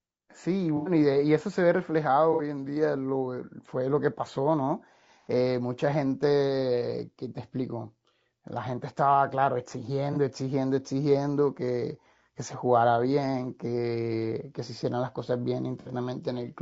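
Throughout, the speech sounds rough and grainy, with noise between harmonics and a thin top band, likely low-delay AAC compression (AAC-ELD) at a rate around 32 kbps. AAC frame loss with concealment appears at 0.77–0.91 s, 2.33–2.41 s, 10.13–10.17 s and 15.80–15.89 s. The decoder patched each gap from the previous spectrum, producing short smeared, noisy patches. The gap lengths fit about three, two, one and two lost frames respectively.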